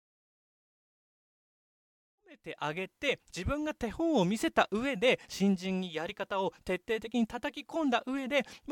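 No technical faults can be heard in this speech recording. The level rises in a smooth fade-in from around 2 s, reaching full level by 2.87 s with no click or hard edge.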